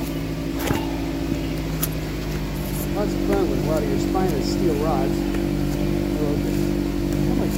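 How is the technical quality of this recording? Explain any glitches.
There's one glitch, a short one. At 1.92 s you get a quick blip from damaged data in the compressed stream. Some of the encoded bytes at that point were corrupted or lost, so the decoder couldn't read the frame properly and briefly lost its place before locking back onto a valid frame header. What comes through is a brief glitch, over in under 10 ms.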